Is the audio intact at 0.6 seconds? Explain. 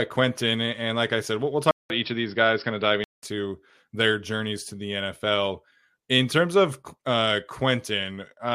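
Yes, the speech at 0.6 seconds is intact, with no dropout, click, distortion or other fault at that moment.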